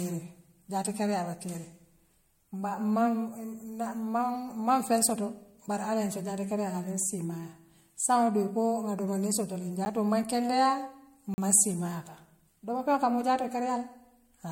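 Throughout the speech, the sound is swirly and hollow. Consonant attacks are smeared, and there is nothing above 16.5 kHz. This is generation loss. The likely cause is repeated lossy coding, with the audio passed through an MP3 encoder about three times. The character fits a bitrate around 64 kbit/s. Each pass quantises again on a shifted frame grid, so noise and spectral gaps build up. The result is more degraded than one encode would leave.

At 9.85 s there is a block of digital silence lasting 10 ms. It comes across as a tick or dip. A second block runs from 11.34 to 11.38 s, lasting 40 ms, and this one is heard as a short hole. In both, a run of samples was replaced by zeros. This probably happened because the output buffer was not filled in time. The sound cuts out and back with no fade.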